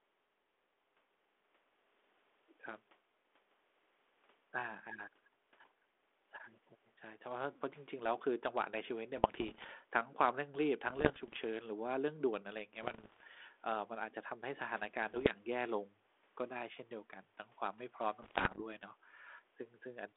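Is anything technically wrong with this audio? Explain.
Yes, there are bit errors on an ADPCM link, in five bursts: 9.16–9.73 s, 10.88–11.41 s, 12.82–13.24 s, 15.11–15.34 s and 18.22–18.61 s. The speech sits on a narrow telephone band that fits a 32 kbit/s G.726 link, and flipped bits corrupt the decoder's step size and predictor, so each error rings on briefly. You hear pops, rough crackly bursts and quick level jumps. The last burst is the harshest, with the densest errors.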